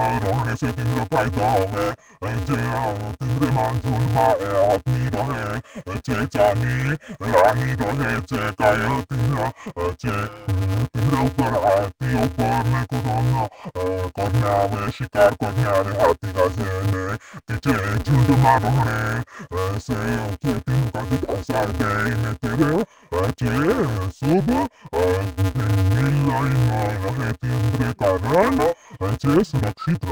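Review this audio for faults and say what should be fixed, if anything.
Interleaved audio read as planar throughout: each 5.33 ms block, which fits a 256-sample buffer, was split into left and right halves, leaving the speech dull, robotic and buzzing near 188 Hz. Prevent it by matching the reader's declared sample layout to the stream's actual interleaved format.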